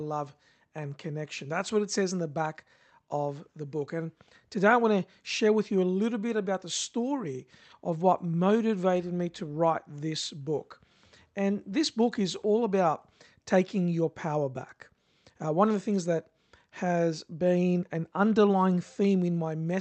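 Nothing goes wrong in this speech recording: it arrives over an ordinary call link whose codec rolls off the top end at around 8 kHz, as such a path normally does, and no glitches turn up anywhere along the way.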